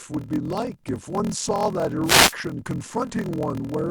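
Block size mismatch (padded), throughout: one stage hands over blocks shorter than the next stage expects, and zeros fill the remainder. That gap in every block produces a 41.7 Hz buzz and slows the speech to 0.889 times normal speed at roughly unchanged pitch, which fits 1024-sample blocks being read as 1152.

Wireless microphone noise hit, from 2.03 to 2.35 s: the radio link of an analogue FM microphone fades as reflected signals cancel, so the receiver's own noise surges up over the speech. It comes through as a brief swish of static about a third of a second long.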